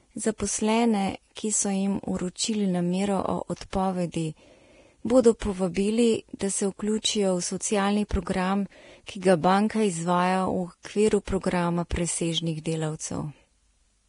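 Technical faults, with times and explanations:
Throughout: Vorbis compression, likely at a low setting; heavy damage consistent with a bitrate around 31 kbps. Nothing survives above 10.6 kHz, so the top end sounds dull, while the treble that remains is quantised so coarsely that fine detail turns into hiss-like noise of similar energy, giving a grainy, roughened texture and smeared consonant onsets. A spectrogram shows a flat ceiling at 10.6 kHz with blotchy, noisy patches below it.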